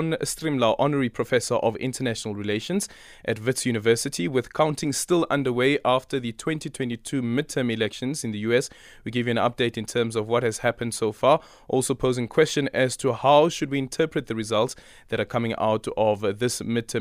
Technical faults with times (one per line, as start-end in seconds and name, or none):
none